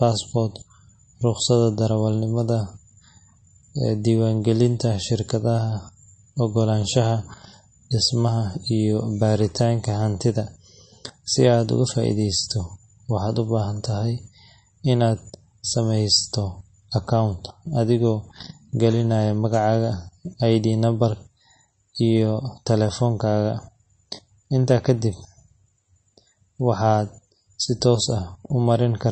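Throughout the speech, the treble stops dead at 8.3 kHz. Weak detail flickers in and out, giving a watery, swirling sound. This is likely MP3 compression starved of bits, which fits a rate of roughly 34 kbps. The damage is plainly audible.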